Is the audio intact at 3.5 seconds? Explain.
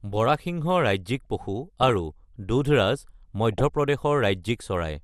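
No. From 3.52 to 3.61 s there is DAB burbling: bit errors slip past error correction into the audio data, so corrupted samples put short blips of noise in single sub-bands and corrupted scale factors make sub-bands jump in level for up to a frame. It sounds like a brief burst of burbling over the speech. Underneath, and across the whole clip, the speech is dull and gurgly, which is steady MP2 compression, likely from a low rate around 80 kbps. That dullness is constant, while the burbling is a sudden, short burst.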